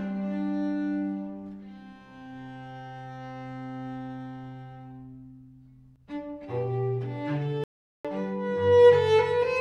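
At 7.64 s the sound just drops out mid-flow and stays silent until 8.05 s, a gap of about 0.41 s, before carrying on. That's a playback stall: the output went quiet because the player couldn't keep feeding it, most likely because its buffer ran dry or its playback thread got held up for a moment. It doesn't sound like a deliberate pause. It's an abrupt hole in the audio.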